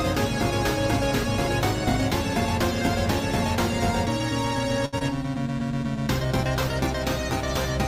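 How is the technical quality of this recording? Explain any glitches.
Two brief glitches sit close together around the five-second mark.

From 4.85 to 4.95 s the sound is held and drawn out, with a faint buzzy dip. This is a short stall from a late packet: the jitter buffer ran dry, so the receiver stretched the last sound by about 72 ms until the packet arrived, then resumed where it had paused. Nothing is lost, but everything afterwards lands 72 ms later.

From 4.99 to 5.03 s there is a quick smear or wobble. This is short concealed packet loss: about 20 ms of audio never reached the decoder, so the receiver filled the gap by extending the preceding sound for roughly 21 ms and then blended back into the real signal.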